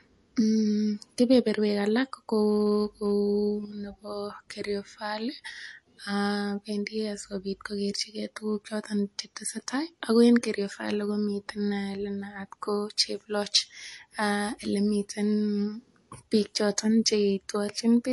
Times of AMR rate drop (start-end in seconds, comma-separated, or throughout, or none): none